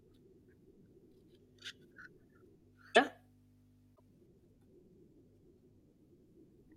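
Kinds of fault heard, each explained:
Broken MP3 bit reservoir: at 2.94–2.97 s and 3.95–4.00 s the speech jumps ahead, likely from missing MP3 frames, which leave the next frame decoding another frame's borrowed bytes. Unlike a plain dropout, the sound skips forward rather than simply pausing.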